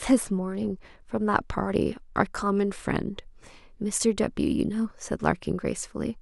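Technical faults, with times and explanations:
0.00 to 2.31 s, channel delay (comb filtering): the speech sounds dull, with its very top end thinned. One channel lags the other by roughly a single sample, a few hundredths of a millisecond, so the mono sum cancels near 20 kHz.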